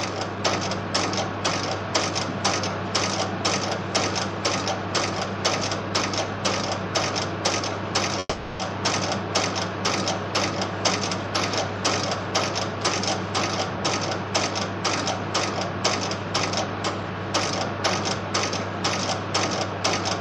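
From 8.19 to 8.61 s the sound stalls: the last moment stretches into a fading buzz for about 400 ms, ends in a brief silence, then resumes where it stopped, with nothing lost but everything now 400 ms later. This call audio freeze was likely caused by delayed packets emptying the jitter buffer.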